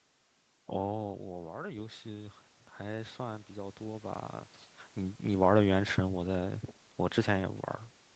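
From 0.88 to 4.31 s, automatic gain rising: after the input dropped by about 10 dB, the gain control lifted its level by about 11 dB over several seconds. Unlike a talker simply moving closer, the room noise swells along with the voice.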